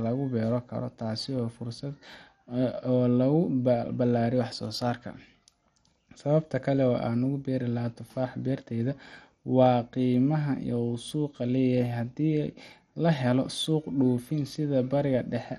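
Throughout the speech, the top end is missing above 13.2 kHz, and the sound is dull, gurgling and grainy. The likely cause is heavy MP2 compression. Sub-bands drop in and out and coarse quantisation roughens the rest, which points to a bitrate near 56 kbps.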